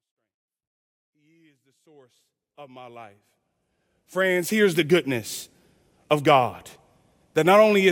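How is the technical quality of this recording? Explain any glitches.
No glitches are audible in this speech recording. The level rises in a smooth fade-in from the very start until about 4.75 s, with no click or hard edge at the opening.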